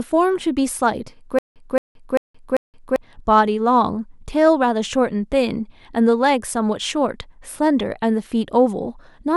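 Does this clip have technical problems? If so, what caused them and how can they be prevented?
Yes. From 1.39 to 2.96 s there is a stutter with silent gaps. A 0.22 s fragment of speech repeats four times, each time followed by 172 ms of dead digital silence, so the pattern comes back on a steady 394 ms cycle. The likely cause is a stalled player or stream: on each retry it replayed its last buffered chunk and then ran empty, so the speech meant for that span never plays. Giving the playback or streaming path more buffering headroom, so it does not underrun, prevents this.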